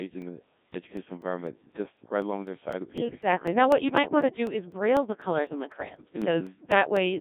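From start to finish the speech passes through the Codec 2 vocoder, and the damage is heavy. The voice sounds robotic and buzzy, consistent with the 1.6 kbit/s mode. Only pitch, voicing, energy and a coarse spectral envelope survive, and the decoder rebuilds the sound from sine waves. On a spectrogram the energy sits between roughly 150 Hz and 3.7 kHz, with nothing above 3.8 kHz. Harmonics look smeared and blocky, and the waveform no longer resembles natural speech.

From 0.22 s to 6.97 s there are periodic USB or driver dropouts every 0.25 s, around 30 in all. Each time the driver or bus was blocked, about 2 ms of audio was lost and replaced by silence. This is heard as a steady tick or pop that shows up only while speech is present. On the waveform each one is a short flat gap that cuts abruptly through the signal. On a spectrogram it is a thin vertical broadband line repeating at a fixed spacing.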